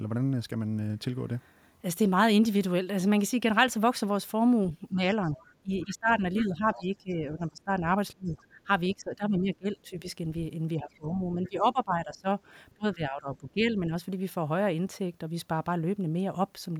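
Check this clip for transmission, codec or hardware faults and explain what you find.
Two faults appear, both pointing to echo cancellation struggling during double talk.

Speech suppressed in double talk, from 4.77 to 10.04 s and 10.76 to 13.93 s: the voice dips in pieces, by as much as 20 dB, likely because the echo canceller attenuated both overlapping talkers.

The other side's voice leaking through, from 5.33 to 6.78 s and 8.36 to 8.94 s: a faint second voice, around 20 to 25 dB below the speech, likely residual loudspeaker echo the canceller left behind.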